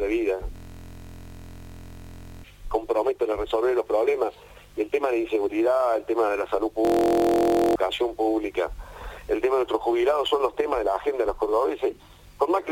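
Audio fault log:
0.56–2.44 s and 6.85–7.76 s, system hang loop: playback froze while the hardware replayed one 23.2 ms block, consistent with a 1024-sample buffer, giving a steady 43.1 Hz buzz and losing about 2 s and 1 s of audio. The waveform shows identical repeating cycles, and the spectrogram shows evenly spaced harmonic stripes.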